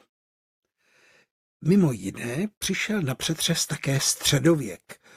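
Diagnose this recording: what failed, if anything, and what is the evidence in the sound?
No fault found in this recording.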